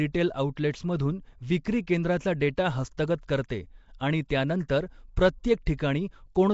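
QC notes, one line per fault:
Throughout, Nellymoser-style compression: the speech carries a rough, hissy halo and a smeared, underwater quality, likely from the Nellymoser Asao codec at a rate pointing to around 32 kbps. Quiet bands starved of bits are refilled with noise, so a spectrogram shows grainy, speckled texture between harmonics, blurred onsets from block coding, and an empty region above 7.7 kHz. The waveform looks fuzzed, with softened transients.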